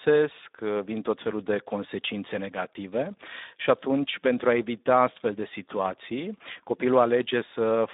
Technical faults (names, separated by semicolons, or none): Speex codec